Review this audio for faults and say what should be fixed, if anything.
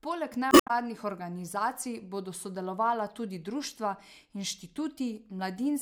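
Damaged data in a compressed stream, from 0.49 to 0.71 s, just before "organizacij bodo sodelovala tudi". Corrupted bytes in the encoded speech make the decoder misread those frames and lose sync while it hunts for the next valid frame header. The result is a brief disruption that stretches the passage by 47.5 ms. To prevent it, deliver the stream over a checked, error-correcting path and verify file integrity before decoding.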